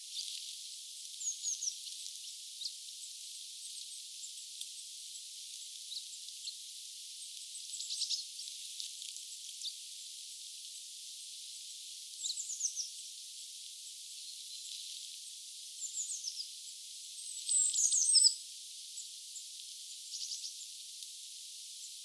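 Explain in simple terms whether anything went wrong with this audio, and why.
Aliasing runs through the whole clip. The sample rate appears to have been halved without first removing the highest frequencies, so sounds above about 12 kHz fold back down to false, unrelated pitches. Sharp, hissy sounds come out gritty and metallic.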